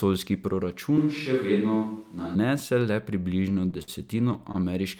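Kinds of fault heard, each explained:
Switch to a distant microphone: From 0.98 to 2.35 s the speech turns roomy and hollow with thinner bass, though the level stays about the same and room noise sits roughly 35 dB below it. This likely means the close microphone dropped out and a farther one took over.
Repeated stalls (stutter): Between 3.37 and 4.56 s the speech catches eleven times as late-arriving data drains the jitter buffer, and the receiver stretches the last sound to fill about 181 ms in total, up to 54 ms per stall. Nothing is lost, but delivery drags.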